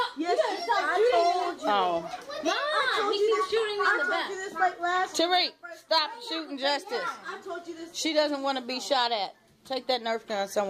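No faults to report; nothing in the audio calls for a timestamp or a fix.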